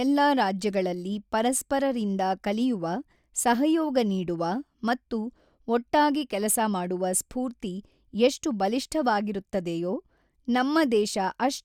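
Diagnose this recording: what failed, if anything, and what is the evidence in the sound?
Nothing failed in this recording, and the sound gives no evidence of any fault at any stage.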